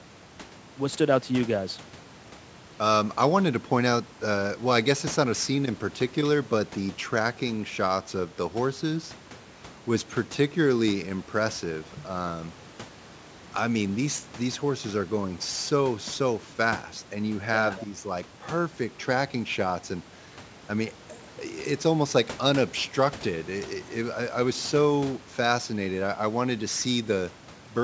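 No faults are audible in the speech; the only processing heard is the call microphone chain, which trims the lowest bass and leaves nothing above 8 kHz, as expected.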